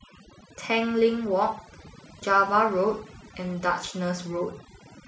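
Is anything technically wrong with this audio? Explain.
Yes. Overdone noise removal runs through the whole speech clip: aggressive denoising silences frequency bands near its noise estimate, taking quiet speech detail too. The background drops and breaks up into twinkling specks, unlike a noise gate, which mutes everything at once.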